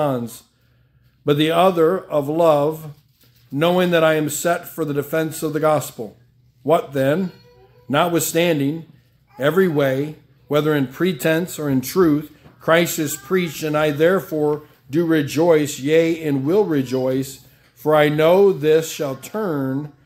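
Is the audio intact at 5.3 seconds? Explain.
Yes, the audio is intact at 5.3 seconds, with no dropout, click, distortion or other fault at that point.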